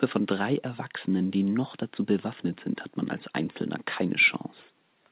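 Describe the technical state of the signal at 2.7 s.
At 2.7 s the speech is intact, with no dropout, glitch or distortion, only the narrow telephone band of the call path, which carries nothing above 4 kHz.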